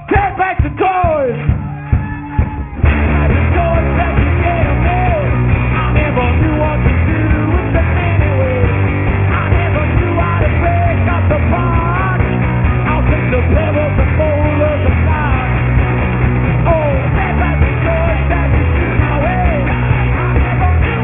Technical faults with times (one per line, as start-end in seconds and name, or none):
0.00-21.03 aliasing